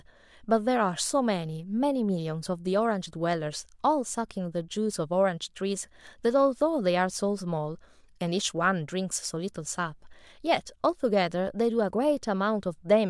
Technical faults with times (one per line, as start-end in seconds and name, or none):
none